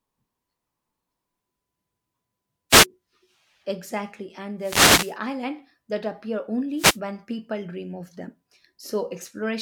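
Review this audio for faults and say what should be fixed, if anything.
Three wireless microphone noise hits break into the speech, at 2.70–2.86 s, 4.59–5.16 s and 6.76–7.00 s, each a short swish of static. The analogue FM radio link fades as reflected signals cancel at the receiver, so receiver noise rises over the voice. The longest hit lasts roughly 0.57 s. Fix this by improving the RF path: use diversity receivers, keep line of sight between transmitter and antennas, and move antennas clear of reflective surfaces.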